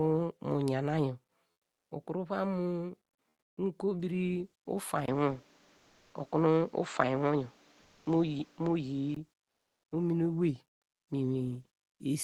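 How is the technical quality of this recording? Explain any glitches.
The recording has two kinds of glitch: brief patches of artificial background and a stretch where the input device sounds worse.

Comfort noise in place of the background appears at 3.29–3.57 s, 5.77–6.13 s, 7.81–8.05 s and 9.43–9.91 s. The likely cause is Opus discontinuous transmission. It stops sending during pauses, and the receiver fills them with smooth, featureless synthetic noise. The level runs about 3 dB lower, unchanged, about 2 dB lower, and about 3 dB higher.

An input switch to a poorer device runs from 5.06 to 9.16 s. It begins with a 20 ms dropout. Nothing passes above 7.9 kHz there, against roughly 12 kHz through the Opus call path elsewhere. The sound turns duller, shifts by around 5 dB, and gains new background noise. That points to a likely change of microphone or headset profile.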